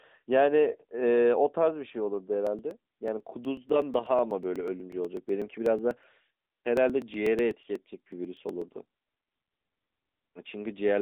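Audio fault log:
Throughout: AMR narrowband mobile codec. The speech is squeezed into a telephone band of roughly 200 Hz to 3.7 kHz with nothing above 3.8 kHz, and at 10.2 kbps the voice takes on a plainly audible buzzy, synthetic edge. Unlike simple band-limiting, the coarse vocal-tract model reshapes the voice's texture.
2.47 to 10.09 s: periodic USB or driver dropouts. About every 0.123 s a sliver of audio, roughly 2 ms, is skipped outright, giving a steady train of ticks, some seventy in all, heard only under signal. The strict regular spacing separates them from random packet loss.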